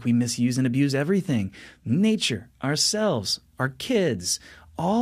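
No audible technical faults.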